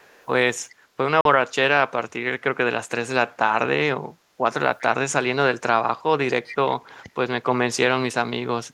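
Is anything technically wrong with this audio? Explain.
Yes. Echo leak is heard at 0.00 to 0.27, 0.69 to 0.75, 4.79 to 4.85 and 6.46 to 6.56 s: a faint copy of the speech trailing it by 395 ms, growing from barely audible (about 35 dB down) to fairly clear (about 15 dB down). It is likely a far-end loudspeaker whose echo canceller let some pickup through. The fixed, discrete delay distinguishes it from room reverberation.

A Bluetooth dropout occurs from 1.21 to 1.25 s: a clean 41 ms hole, after which the speech resumes as though it had played on. The length fits a couple of likely lost packets. True silence, not a crackle or smear, separates it from a codec glitch.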